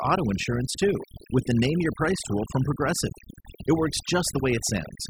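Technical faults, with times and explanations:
Throughout, overdone noise removal: bands near the noise estimate are cut away, leaving twinkling specks in near-silent gaps, unlike a gate's whole-signal muting.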